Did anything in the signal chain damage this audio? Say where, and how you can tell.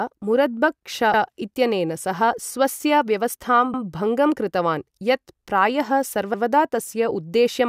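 Yes. Overlapping chunks at the buffer stage: at 1.14, 3.74 and 6.34 s, just before "इत्यनेन सह" at the first, about 100 ms plays twice, a stutter at each join of the 2.5 s chunks. Each chunk starts before the previous ended. Unlike a dropout, sound repeats rather than vanishes.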